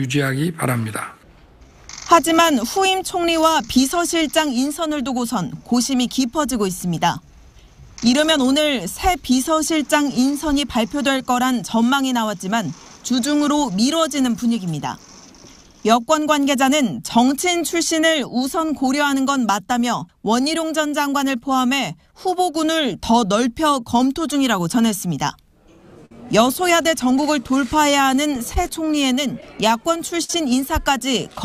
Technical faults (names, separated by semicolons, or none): clock drift between sender and receiver; repeated timing corrections; short stall from a late packet; scattered short gaps